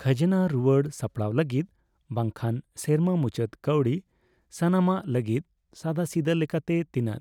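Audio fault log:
0.32 s and 6.68 s, dropped buffer (overrun): a small jump in the speech, likely from roughly 5 ms of samples lost and the edges joined directly.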